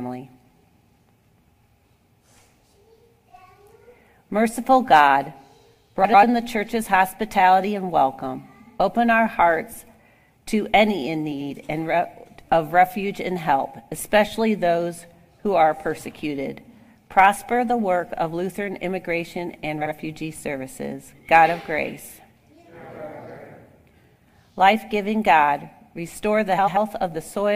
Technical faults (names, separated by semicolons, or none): frames out of order